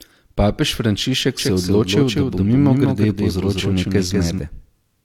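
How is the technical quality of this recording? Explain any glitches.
The recording has one clear glitch. A doubled audio track runs from 1.39 s to 4.39 s. For those three seconds a second copy of the speech sits roughly a fifth of a second behind the original, a few decibels quieter. It is likely the same signal arriving twice, through a slower second capture path or two misaligned copies in an edit. The copy is dry and full-band, with no room tail, so it sounds like a flat slapback echo that switches on and off abruptly.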